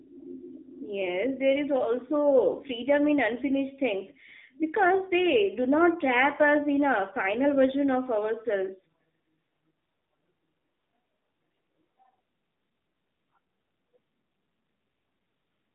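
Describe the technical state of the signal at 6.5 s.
At 6.5 s the speech is still passing through an AMR narrowband mobile codec, as it does for the whole clip; its pulse-driven vocal-tract model leaves a 200 to 3600 Hz line band with nothing above 3.7 kHz, and plainly buzzy, synthetic damage that fits a low mode near 7.4 kbps.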